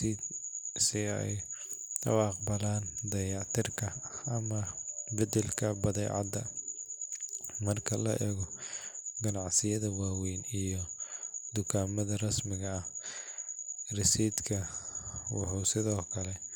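No technical faults can be heard anywhere in the recording.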